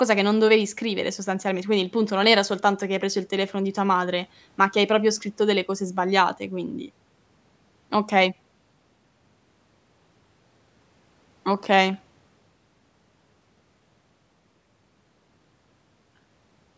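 No technical fault can be heard in this speech recording, which carries the ordinary marks of call microphone processing: its high-pass filter trims the lowest bass, and nothing is present above 8 kHz.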